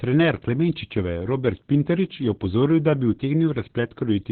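From start to finish the speech sounds muffled, hoarse and faintly robotic, with nothing above 4.3 kHz. This is heavy Opus voice compression: the SILK linear-prediction coder has cut the band to narrowband and coded the excitation coarsely, which fits a bitrate near 8 kbps.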